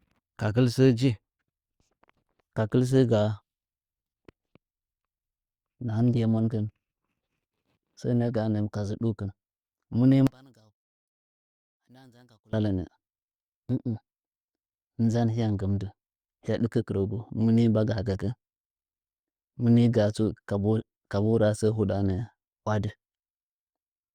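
A speech recording whose mono sum collapses by about 32 dB from 10.27 to 12.53 s, likely from one channel inverted, so centred content cancels. The waveform flattens almost to nothing and the spectrogram thins sharply.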